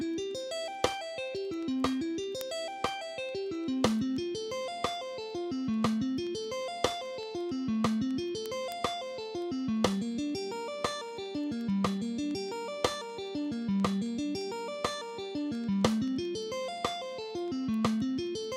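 From 0.14 s right through to 18.53 s there's a steady run of word clock ticks, roughly ten a second, a couple of hundred in all. The receiver is free-running rather than locked, drifting something like 200 ppm, so it slips a single sample each time.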